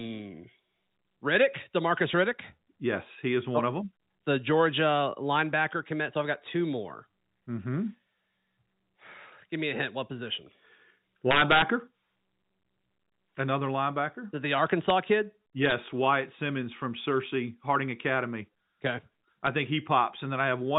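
Integer overflow: at four moments, loud peaks in the speech exceed the largest value the integer path can hold and wrap around to the opposite sign instead of being limited. Each wrap flips the waveform across the full range, giving a harsh crack far sharper than clipping. This happens from 11.31 to 11.62 s with about 2 dB of overdrive, at 14.90 s, from 15.66 to 15.72 s with about 1 dB, and at 19.47 s, all through the band-limited telephone sound of the G.711 path.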